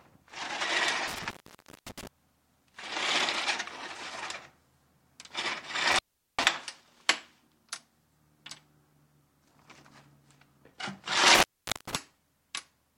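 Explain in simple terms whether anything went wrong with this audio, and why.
Something did go wrong: an intermittent contact. A loose cable or plug briefly lost its connection three times, around 1.08 to 2.07 s, 5.92 to 6.46 s, and 11.35 to 11.95 s. Each time, the sound crackles, then drops out for about half a second, leaving faint hiss.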